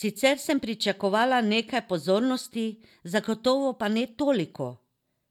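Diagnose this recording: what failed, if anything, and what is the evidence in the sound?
Nothing in the chain failed.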